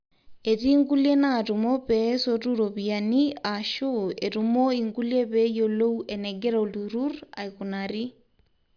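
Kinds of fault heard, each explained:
Nothing stood out as a fault on listening to this speech.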